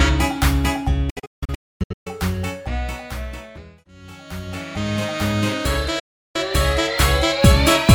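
A digital broadcast dropout: the receiver stopped getting valid frames and muted until good ones returned. Between 1.10 and 2.07 s the sound cuts out in several short holes, the longest 256 ms, each with a quick 8 ms fade. A single 352 ms silence follows at 5.99 s.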